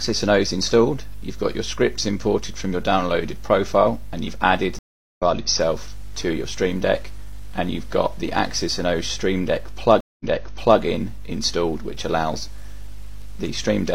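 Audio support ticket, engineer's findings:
Stream reconnect at 4.79–5.22 s and 10.00–10.80 s: dropped connection, fresh decoder mid-stream. Silences of 0.39 and 0.2 s; audio resumes about 0.4 s ahead, then 0.6 s earlier (server resend burst).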